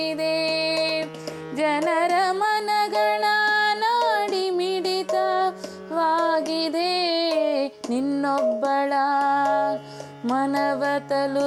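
No technical faults can be heard in this recording.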